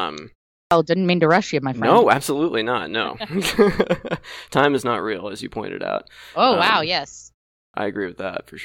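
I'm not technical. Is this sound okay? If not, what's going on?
No. This speech has a clipped start after a pause, twice. After a short silence of about 0.4 seconds, the playback device seems to doze off. It needs a moment to wake up again. So the first sliver of sound, about 50 milliseconds, gets swallowed. You hear it at 0.66 to 0.71 seconds, just before "didn't mean to rush". You hear it again at 7.69 to 7.74 seconds, right after "um wow yes". The sound jumps in abruptly.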